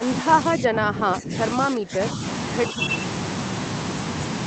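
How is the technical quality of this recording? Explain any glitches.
The recording has two stretches where the talker is pushed down, heard through a call codec whose top end stops near 8 kHz. From 0.0 to 1.34 s and again from 1.54 to 2.21 s, the speech sinks by up to roughly 15 dB, thinning and breaking into pieces for about a second and then for a little under half a second. This is likely speech suppressed in double talk. With both ends talking at once, the echo canceller couldn't separate the near talker from the loudspeaker echo and turned both down. Packet loss would leave clicks, gaps or robotic fill. Here the level ducks and the high end fades while the sound carries on underneath.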